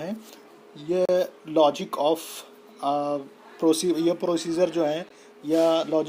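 At 1.05 to 1.09 s, and again briefly at 5.09 s, the sound stops dead for about 35 ms and then 15 ms. These are gaps between stream segments. Adjacent segments, spaced in a way that fits 2-second segments, were timed with a small space between them, and the player filled it with silence. Unlike a dropout, nothing is missing. The sound resumes exactly where it left off, just slightly later, with hard-edged, clean holes rather than lost material.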